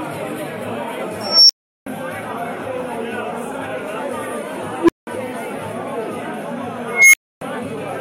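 It's a recording of everyday sounds, hit three times by an unstable filter: a recursive filter whose feedback has run away, so a tone swells and then the output collapses into silence until it resets. At 1.21 to 1.86 s a tone around 5 kHz builds over about 0.29 s and then goes quiet for 0.37 s. At 4.80 to 5.07 s a low tone near 300 Hz builds over 0.09 s and then drops out for 0.19 s. At 6.88 to 7.41 s a tone around 2 kHz builds over 0.25 s and then goes silent for 0.28 s.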